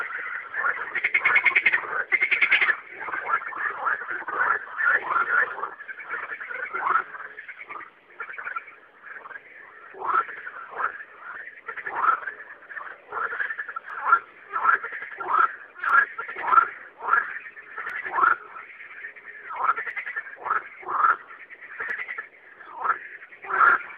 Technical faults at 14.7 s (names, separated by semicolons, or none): periodic USB or driver dropouts